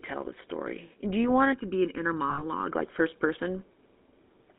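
A buzzy, gravelly roughness runs through the whole recording, and the sound is boxed into a narrow telephone band of roughly 250 Hz to 3.6 kHz, with no air or sparkle above it. This is the GSM full-rate codec. It rebuilds the voice from a vocal-tract model driven by a sparse, regularly spaced pulse train, keeping only a third of the excitation detail. The damage is plainly audible and fits a 13 kbps full-rate stream.

From 1.53 s, right after "you want", until 2.72 s, the voice turns hollow and phasey, as if heard down a tube. That is channel delay (comb filtering). One channel lags the other by about 0.7 ms, and when the two are summed to mono, shared content cancels at evenly spaced frequencies. The first notch falls around 700 Hz, with further fixed notches spaced above it through the band. The hollowness holds steady for the whole stretch.

Inside that stretch, from 2.30 to 2.43 s, just before "like first", the sound freezes into a short, rough metallic ring. 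These are lost GSM frames. The decoder repeated the last good frame's settings to cover about 80 ms of missing data, which fits four 20 ms frames. The gap is short enough that the ring is not cut to silence.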